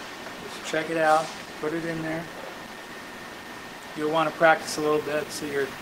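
Video or display buzz enters at 4.62 s and runs to the end of the clip. A screen or video cable is coupling its signal into the audio path, so the picture's 50 Hz field rate shows up as a coarse buzz with a spray of hash riding above it. A thin, very high tone near 15.6 kHz sits on top, which is the line-scan rate leaking through. The interference sits well below the wanted sound, roughly 20 dB down.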